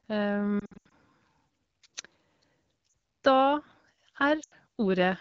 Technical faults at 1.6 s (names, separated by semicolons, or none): none